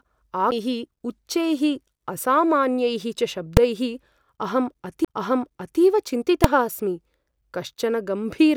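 At 0.51 s, just before "उच्चैः असामान्यैः च", a CD skip gives a tick and a brief mute of about 10 ms before the speech resumes from another place, as the laser jumps to a different turn of the disc's spiral. On a waveform this appears as a short flat gap with a discontinuous join. At 3.57 s, just after "उच्चैः असामान्यैः च", invalid numbers at full scale produce a single bang: a 2.67 ms block, which fits a 128-sample block, is pinned to one extreme value. It shows as a flat waveform slab far beyond the speech peaks and a broadband vertical stripe on a spectrogram. A second CD skip, from 5.05 to 5.08 s, mutes for about 30 ms and jumps position again. The same full-scale bang returns at 6.44 s.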